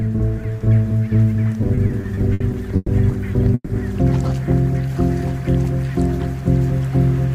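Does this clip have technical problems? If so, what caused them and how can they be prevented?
Yes. From 1.61 to 2.90 s there are repeated stalls (stutter): eight short gaps, the longest 120 ms, where late packets emptied the jitter buffer and the receiver stretched the last sound, about 290 ms in all, so the passage drags without losing anything. A larger adaptive jitter buffer or a steadier network path prevents this.

At 3.54 to 3.71 s a call audio freeze holds the last sound as it fades for about 150 ms, ending in 30 ms of silence before playback resumes intact. The likely cause is a sudden 150 ms delay spike on the network. Prioritising voice traffic with QoS helps prevent it.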